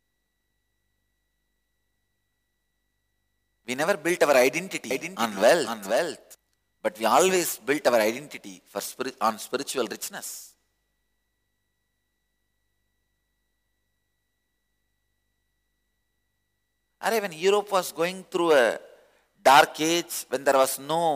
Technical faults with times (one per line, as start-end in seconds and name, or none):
4.91-6.35 doubled audio track